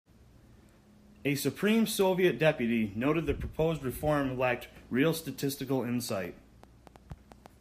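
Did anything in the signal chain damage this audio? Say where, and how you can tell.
Yes. From 6.09 s to 7.47 s a train of clicks sits over the speech: around seven sharp pulses of much the same shape, arriving unevenly at roughly 5.1 per second and peaking at about the level of the speech itself. The spacing wanders rather than locking to a fixed period, which points away from a clean buffer cycle. The likely stage is the analogue wiring or the interface, with electrical interference or a faulty connection or power supply injecting short impulses into the path.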